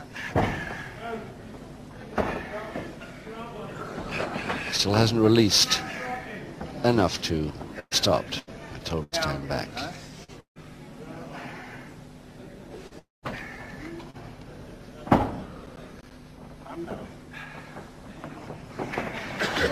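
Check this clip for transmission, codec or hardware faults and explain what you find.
Four kinds of fault are present, all from 7.8 s onward.

Burst of packet loss at 7.79, 8.39 and 9.03 s. About 80 to 120 ms went missing each time. Receiver concealment fills it with a fading buzz or hiss, and the first burst ends in 40 ms of silence.

Short concealed packet loss at 10.24, 12.87 and 14.10 s. About 40 ms is lost and bridged from the preceding sound. Each is heard as a brief smear or wobble.

Long network dropout from 10.40 to 10.58 s and from 12.99 to 13.25 s. The sound fades into silence lasting 110 and 180 ms. The likely cause is 160 and 240 ms of audio never arriving.

Processor overload crackle from 15.66 to 16.11 s. About seven buffers of around 10 ms each miss their deadline and play as silence. Together they sound like gritty tearing.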